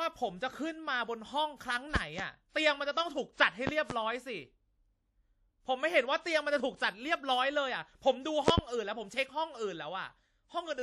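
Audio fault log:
throughout, WMA compression: the speech has plainly audible codec damage, a ringing, washy quality with hiss that rises and falls with the signal, and nothing above 14.2 kHz; the likely cause is a low-bitrate transform codec such as WMA, whose coarse quantisation smears noise across each long block and drops weak high lines.
1.96–2.22 s, 3.67–3.93 s and 8.48–8.61 s, loud pop: each event is a pair of sharp pops sitting well above the speech, roughly 20 dB at the first two and 25 dB at the third, with the speech carrying on beneath; likely from a sudden voltage step or pulse, from a plug, switch, static or driver glitch, entering the signal path.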